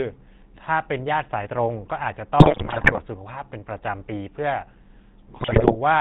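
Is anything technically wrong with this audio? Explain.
Yes. The whole recording has passed through the GSM full-rate codec, and the damage is plainly audible. The codec rebuilds the voice from a vocal-tract filter excited by sparse, regularly spaced pulses, which fits a rate of about 13 kbps. That leaves the speech buzzy and gravelly throughout. On a spectrogram the energy stops flat at 4 kHz, and the harmonics look coarse and smeared instead of cleanly striped.

GSM bit errors hit twice, from 2.39 to 3.02 s and from 5.40 to 5.77 s. Corrupted bits reach the decoder and scramble the filter, pitch and gain values for the affected frames. The speech breaks into squawks, pops and gargling there. The waveform shows sudden level jumps and spikes, and the spectrogram shows blocky, misplaced bands of energy that change from frame to frame.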